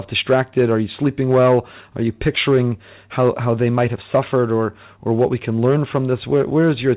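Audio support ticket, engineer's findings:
Nothing stood out on listening to the speech, which carries the expected call-path band limit with no content above 4 kHz, consistent with G.711 mu-law at 64 kbps.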